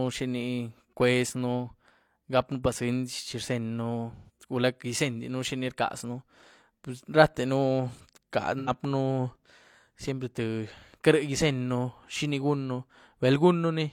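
AAC frame loss with concealment hits at 4.15–4.30 s and 8.59–8.70 s. The decoder patches each gap from the last good spectrum. Each sounds like a brief smeared, phasey blur.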